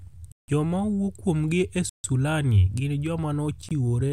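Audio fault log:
0.32–0.48 s, 1.89–2.04 s and 3.69 s: block of digital silence. The speech drops to silence three times. The gaps last 160 ms, about 147 ms and about 20 ms. The second falls after "kuomgi e" and before "sulani gin joma". The third comes after "e sulani gin joma". Samples were replaced by zeros, likely because the output buffer was not filled in time. There is no fade, so the sound cuts out and back abruptly. The first two are audible holes.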